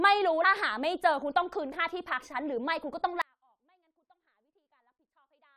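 A speech clip with two faults. At 0.43 s, damaged data in a compressed stream makes a brief glitch as the decoder resyncs. From 3.22 s to the end, an audio dropout to a faint residue cuts the sound abruptly rather than fading it. Only a faint sound roughly 40 dB down remains, likely from the signal being lost while the path after the break stayed live.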